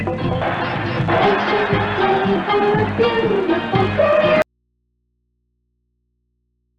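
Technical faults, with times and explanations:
4.42 s to the end: audio dropout to a faint residue. The sound cuts off abruptly mid-flow and never returns. What remains is a low mains hum, roughly 55 dB below the earlier signal level. The change is instant rather than a fade or a natural pause, and the hum shows that the downstream path stayed live with an open input. That points to a likely break in the source feed or its connection ahead of it.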